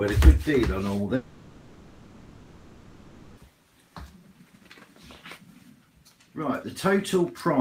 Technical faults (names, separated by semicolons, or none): long network dropout